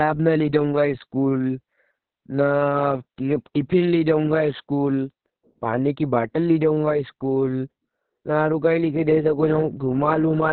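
From start to finish, Opus voice compression running its SILK coder in narrowband squeezes the speech into a band with nothing above 4.4 kHz and codes the excitation very coarsely, which fits a bitrate around 6 kbps. The speech sounds muffled, hoarse and slightly robotic.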